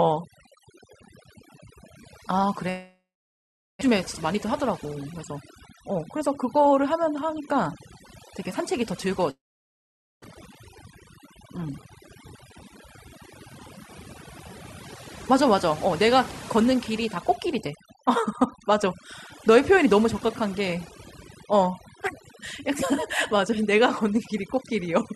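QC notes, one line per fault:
throughout: overdone noise removal. Frequency bands near the estimated noise floor are pulled far down or gated off, taking quiet parts of the speech with them. Pauses fall to near silence with twinkling specks.
2.69–3.83 s and 9.31–10.26 s: long network dropout. The last sound stretches into a fading buzz or hiss, then roughly 0.8 s of silence before speech resumes with about 0.6 s skipped each time. This is likely a long gap in arriving audio that the receiver covered with concealment before giving up.
3.87–7.56 s, 8.40–9.20 s, 11.58–11.73 s, 15.31–19.86 s: jitter buffer speed-up. The receiver trims pitch-period slices to shed excess buffered delay. Speech runs faster at unchanged pitch: 111 % in the first run (about 0.4 s removed), 104 %, a sharp 184 % burst, then 105 %.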